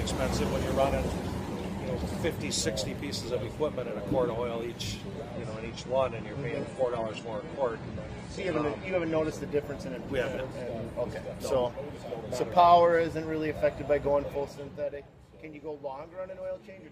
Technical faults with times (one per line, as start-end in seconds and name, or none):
5.32-9.32 adaptive stream at a lower bitrate